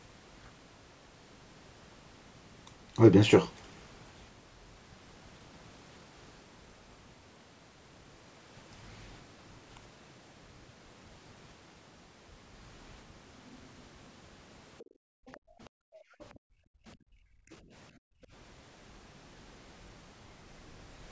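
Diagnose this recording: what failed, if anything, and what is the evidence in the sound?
Faint scraps of a second voice sit well under the talker at 14.79–14.85, 15.27–15.39, 16.20–16.26 and 17.52–17.56 s, likely the other side's voice leaking through a call echo canceller that missed some loudspeaker pickup.

Background gated by the echo canceller: at the call-processing stage, room sound drops by up to about 40 dB across 14.85–17.72 s and again at 17.92–18.32 s, as the canceller clamps the microphone.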